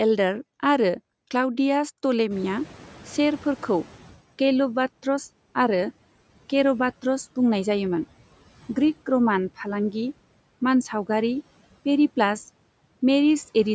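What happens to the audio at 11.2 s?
Nothing goes wrong at 11.2 s: the speech continues intact through that moment, with only the steady room noise sitting well beneath it.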